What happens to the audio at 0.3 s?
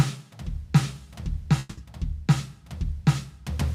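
Nothing goes wrong at 0.3 s: the music plays through that moment intact, with no dropout, click, distortion or other fault to be heard.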